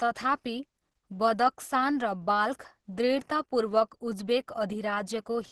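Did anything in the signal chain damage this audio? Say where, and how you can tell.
Yes. Opus compression, heavy and present throughout, is the damage, and it sits at the codec stage. The speech has no content above 12 kHz and sounds muffled, hoarse and grainy, with no swirling holes. That points to the likely cause: Opus at a low rate around 12 kbps running in its hybrid mode, where the lower band is coded by the speech coder and upper bands are filled coarsely to hold their energy.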